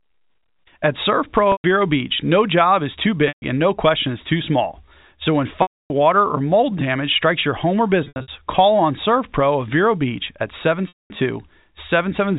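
Packet loss with pitch repetition at 1.52–1.64, 3.28–3.42, 5.62–5.90, 8.04–8.28 (scattered) and 10.88–11.10 s: lost stretches are filled by repeating the last pitch period, giving held, buzzy tones that fade toward silence in the longer gaps.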